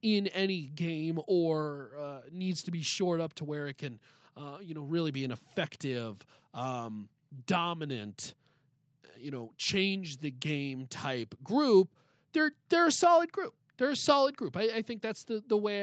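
No technical faults are audible.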